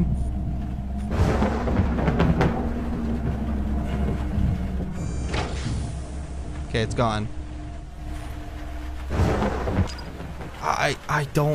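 From 4.74 s to 8.13 s, digital radio blending to analogue: the receiver lost digital reception and cross-faded over 0.34 s to the same station on FM, then back. Level falls about 4 dB and hiss sits around 35 dB down. Unlike a dropout, the sound never stops.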